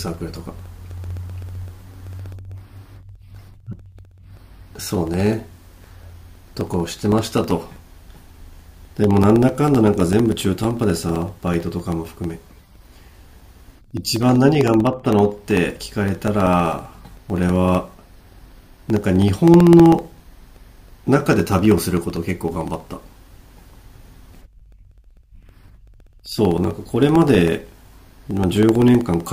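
Periodic USB or driver dropouts run from 0.08 s to 29.27 s: every 64 ms, something stalls the audio path and about a millisecond of the speech drops to silence, giving hundreds of evenly spaced ticks that sound only while there is signal.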